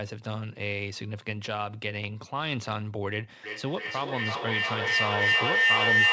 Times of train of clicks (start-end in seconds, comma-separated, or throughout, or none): none